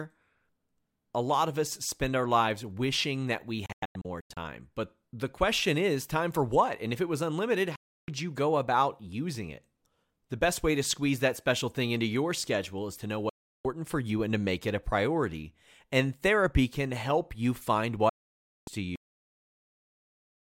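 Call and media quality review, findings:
Digital broadcast dropout, 3.66–4.37 s, after "lives wishing that we": receiver muting on failed frames. Several short holes over about 0.7 s, longest 96 ms, 3 ms fade edges.

Digital broadcast dropout, 7.76–8.08 s, between "if it was unlimited" and "you go about using": 320 ms muted.

Digital broadcast dropout, 13.29–13.65 s: 352 ms muted.

Digital broadcast dropout, 18.09–18.68 s, after "can help you find": 576 ms muted. Hole lengths fit 32 ms frames; audio sent during gaps unrecoverable.

Cut-off end, 18.96 s: speech stops mid-sound, drops straight to digital silence, no decay. Final buffers never written or played out. Probable component: recorder or player stopping before its buffers were flushed.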